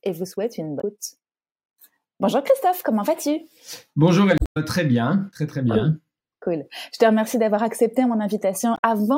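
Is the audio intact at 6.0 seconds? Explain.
Yes, the speech at 6.0 seconds is intact, with no audible fault at that moment.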